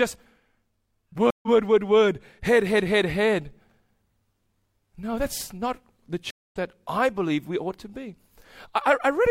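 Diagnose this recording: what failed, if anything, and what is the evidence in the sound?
The speech cuts to silence at 1.30 s for 125 ms and at 6.31 s for 209 ms, resuming about 0.1 s and 0.2 s further on. That is a network-stage stream reconnect: the connection drops, the player rejoins the live stream, and a fresh decoder starts mid-stream, skipping audio.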